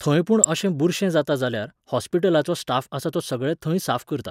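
A compressed frame in this speech recording arrived with flipped bits and the decoder played it out regardless, a case of a corrupt frame decoded. Misread codes and wrong gain values pushed energy into frequencies that have nothing to do with the speech, so at 0.44 s a short glitch occurs, spanning only a few frames before the signal returns to its proper spectrum.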